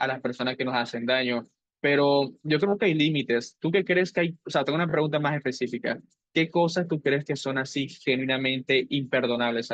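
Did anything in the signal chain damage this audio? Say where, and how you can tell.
Yes: repeated frames, a codec or storage fault replaying the same blocks. Stutters at 2.67 s and 4.89 s show as back-to-back identical 10 ms and 20 ms waveform copies.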